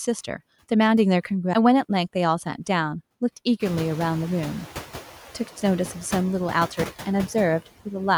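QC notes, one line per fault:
throughout, noise suppressor artifacts: background noise dips between phrases and swells under speech, as the suppressor cuts bands it judges steady noise by about 8 dB.
3.6–4.66 s, noise suppressor catching up: the room noise jumps by about 20 dB around 3.5 s and comes through with only about 5 dB of reduction, then sinks over 1.06 s as the suppressor's noise estimate catches up.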